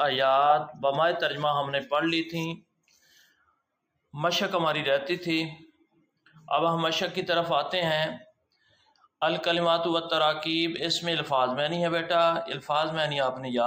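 A speech-tuned noise suppressor has been left running on this audio, and it keeps mistaking steady tones and tails for noise, so the level breathes by roughly 5 dB throughout, with held parts sinking and thinning while the attacks get through. It bites hardest in three spots, where it turns the sound down further: 2.57 to 3.58 s, 5.73 to 6.48 s and 8.29 to 9.07 s, each dipping by about 21 to 22 dB as the suppressor clamps down on sustained material.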